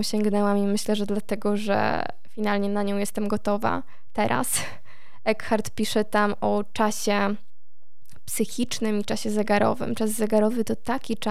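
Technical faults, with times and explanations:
Throughout, DC offset: nothing audible, but a steady component of about -29 dBFS sits at zero frequency, shifting the whole waveform off centre and eating headroom.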